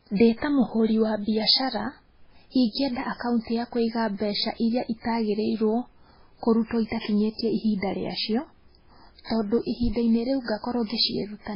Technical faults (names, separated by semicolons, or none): MP3 compression